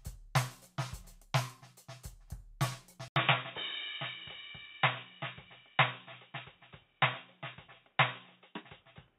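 At 3.08 s the music breaks off for 80 ms, then returns dull and boxy, with nothing above 3.8 kHz, and stays that way to the end. This is most likely the input switched to a poorer device, the new device passing only a narrow band. Unlike a simple low-pass filter or a codec dropping its bandwidth, the change comes with that brief gap and a faint new background noise, while the loudness stays about the same.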